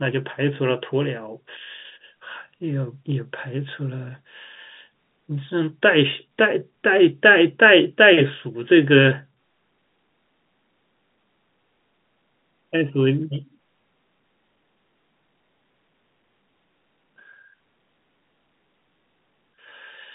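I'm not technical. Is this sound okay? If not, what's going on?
Yes, it's fine: this is speech over an ordinary landline-style telephone connection, so it has that familiar narrow phone-call sound, and there's nothing wrong with it.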